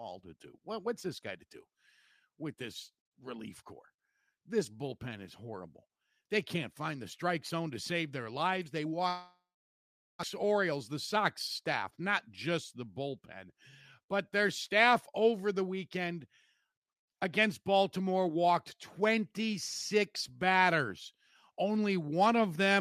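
A speech clip with two linked faults. From 9.08 to 10.25 s there is a long network dropout, most likely caused by packets failing to arrive. The last sound is stretched into a fading buzz, then about 0.79 s of silence follows, and when the speech resumes about 1.0 s of it is gone for good. The gap also leaves the playback running roughly a tenth of a second behind where it was. Right after, from 10.43 to 12.29 s, a jitter buffer speed-up recovers that lag. Repeated short cuts of a pitch period or a few are taken out, so the speech plays at 105% of normal speed with its pitch unchanged. Over the stretch about a tenth of a second is trimmed, giving a slightly hurried delivery that settles back to normal timing just before "just the bullpen but".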